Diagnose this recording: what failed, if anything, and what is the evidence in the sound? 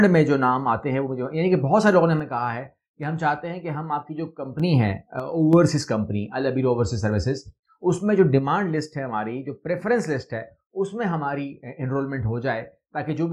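A likely intermittent contact in the analogue wiring, such as a loose stereo connector, makes one channel drop out. Once the two channels are summed to mono, the sound shared by both sides falls abruptly by about 6 dB and anything carried only on the lost side disappears. It happens from 2.20 to 4.60 s, briefly from 5.20 to 5.53 s, and from 8.39 s to the end, with the level snapping back up in between.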